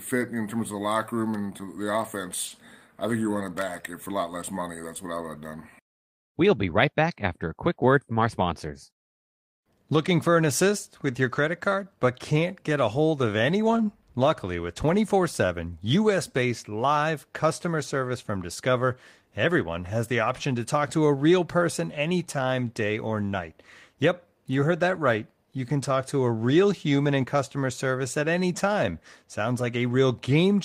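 A speech recording carries a faint, uneven drag through its whole length, because of clock drift between sender and receiver: the sender's clock runs around 3 percent slower than the receiver's, so the receiver's jitter buffer keeps draining and must be topped up to keep playback going. The result is repeated timing corrections from 0.16 to 1.85 s and again from 3.81 s, just after "think you run it", to 30.30 s. Small stretches break the tempo at irregular points, as short pieces are repeated to play at 97 percent speed. That adds about 50 ms in the first stretch and roughly 0.7 s in the second. Between them, from 2.47 to 2.53 s, just before "I think you run", a sound is held too long with a slight buzz or dip. This short stall from a late packet happened because a packet arrived late and left the buffer empty. The receiver stretched the last sound for 40 ms until the packet came in, then carried on with nothing lost, though the delay grew by 40 ms.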